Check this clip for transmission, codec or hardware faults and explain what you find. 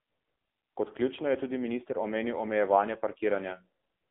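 One codec fault runs through the whole clip: AMR narrowband mobile codec damage, and it is heavy. The speech sits in a band of roughly 250 Hz to 3.6 kHz, with nothing above 3.8 kHz. The codec models the vocal tract and drives it with a few pulses per subframe. With so few bits, the voice turns buzzy and synthetic. That fits a low mode near 6.7 kbps. Sibilants lose their edge.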